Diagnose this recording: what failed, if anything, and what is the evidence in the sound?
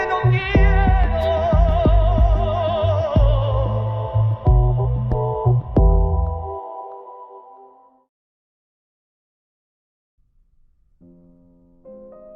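Nothing failed in this recording, and the sound gives no evidence of any fault at any stage.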